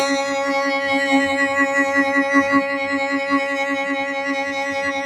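A noise suppressor applied to music runs throughout the clip, from start to finish. A processor tuned for speech treats the music's sustained tones, ambience and reverberant tails as background noise and pulls them down. Attacks pass mostly intact while held material sinks by roughly 5 dB before recovering on the next onset, so the level pumps and flutters, and decays sound clipped short and thinned out rather than ringing naturally.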